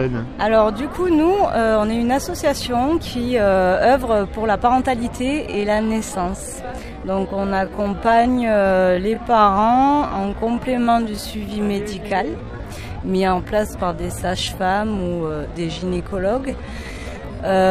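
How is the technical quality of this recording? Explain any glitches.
The recording has one fault. From 5.39 s to 17.49 s there is a time-stretched section: the pace abruptly drops to about 0.67 times normal speed while the pitch holds. This is likely software stretching that repeats short pieces, so the sound drags.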